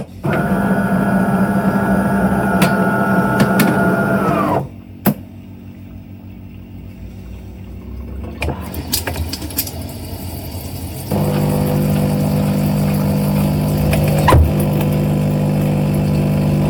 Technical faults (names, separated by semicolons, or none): hard clipping